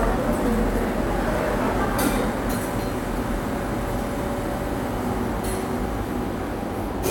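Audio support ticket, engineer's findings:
No technical faults found in the everyday sound recording; the signal holds steady throughout, with no dropouts, level jumps or timing disturbances to report.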